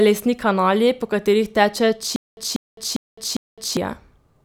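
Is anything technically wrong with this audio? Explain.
Yes. From 2.16 to 3.77 s, just after "kanali po katerih teče", there is a stutter with silent gaps: a 191 ms burst repeats four times, each followed by about 211 ms of dead digital silence, every 402 ms. A stalling player likely replayed its last fragment on each retry. Unlike random dropouts, the same audio returns at an even pace, and the speech that belonged there is lost.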